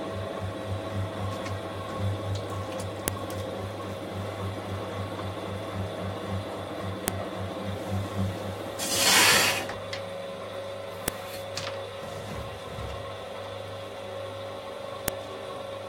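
Separate audio pieces, joined every 4 seconds without their file headers being stripped, let the header bytes play as samples: a file header played as audio. Each join gives a sharp, loud click at 3.08, 7.08, 11.08 and 15.08 s, regardless of the surrounding sound.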